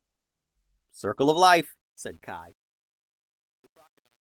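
At 1.13 s a stretch of about 120 ms turns rough and grainy, lasting to 1.35 s. There is no gap. This is a lost packet rebuilt from error correction. Several packets went missing. The length fits six 20 ms frames. Each one was replaced by the low-bitrate backup copy carried in the next packet. Those copies keep the sound going but sound coarser and noisier.

From 1.81 s to the end, truncation distortion on a fade sets in. The level stage keeps too few bits, which points to about 9-bit precision, and adds no dither. As the level drops, the waveform collapses into coarse steps. From about 2.31 s it is at its worst: gritty.

Inside that, from 2.37 to 2.39 s, another single lost packet is rebuilt from error correction. It leaves a brief rough patch of 20 ms.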